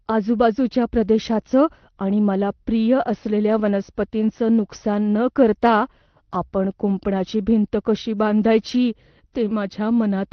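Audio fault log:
No faults: the speech comes through a normal call path, its top end stopping near 6 kHz as an Opus call codec at a modest bitrate would leave it.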